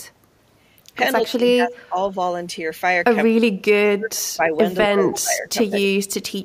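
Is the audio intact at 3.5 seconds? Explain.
No, the speech dips by roughly 35 dB from 3.33 to 3.6 s: speech suppressed in double talk, likely an echo canceller muting overlapping talk. The waveform shrinks and the spectrogram fades there.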